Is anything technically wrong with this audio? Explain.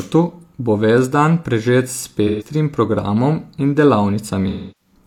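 Yes. At 2.27 to 2.46 s, just before "programom in", the speech turns briefly smeared and phasey, and again from 4.49 to 4.94 s for longer. This is AAC frame loss with concealment. About 128 ms and 299 ms of frames went missing, and the decoder patched each gap from the last good spectrum.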